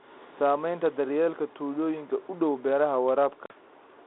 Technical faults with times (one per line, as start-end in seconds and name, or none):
3.46-3.53 packet loss on an ADPCM call